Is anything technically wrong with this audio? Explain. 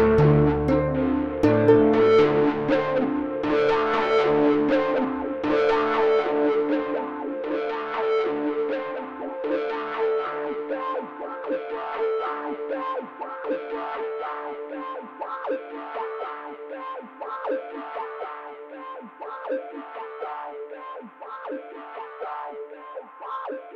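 No, there's no technical fault to be heard in this audio.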